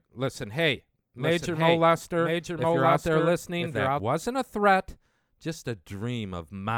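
Right after "listen hey", at 1.18 s, a doubled audio track begins and runs to 4.00 s, ending before "wasn't a threat just". A second, full-band copy of the speech trails the original by about a second, a few dB quieter. It carries no reverb or room colour. It starts and stops abruptly. The cause is likely a second capture through a slower path, or an edit holding two out-of-step copies.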